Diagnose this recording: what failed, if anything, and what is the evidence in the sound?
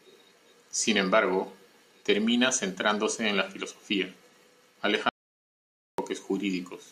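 The input path most likely failed for a moment, through a disconnected device, a broken link or a stray mute, while the recorder kept writing silence. The result is an audio dropout to silence: the speech stops abruptly at 5.09 s and resumes abruptly at 5.98 s. That gap of about 0.89 s is silent, with no room tone or noise floor. Whatever was spoken during it is simply absent rather than muffled or distorted.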